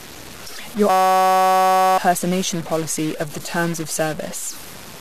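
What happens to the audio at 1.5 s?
A system hang loop runs from 0.90 to 1.98 s. A 5.33 ms slice, which fits a 256-sample buffer, repeats exactly, giving a steady buzz at 188 Hz. Roughly a second of speech is lost. Underneath, distortion persists, with noise in the pauses, likely from a stuck bit.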